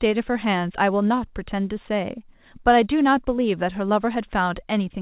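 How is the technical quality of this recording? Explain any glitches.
No glitches turn up anywhere in the recording, and the speech comes across with the narrow, phone-like sound you'd expect from a call path running G.711 mu-law at 64 kbps, with nothing above 4 kHz.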